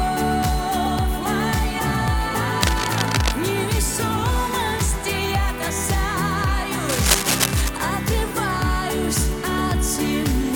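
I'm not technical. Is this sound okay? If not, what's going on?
No. There is cable scratch noise at 2.61 to 3.33 seconds and again at 6.89 to 7.69 seconds. Each time, a rough scratching, rustling burst sits on top of the sound for under a second. The second is about as loud as the sound itself, and the first is a little quieter. The likely cause is a worn cable, plug or control being moved, so its electrical contact flickers and adds crackly noise.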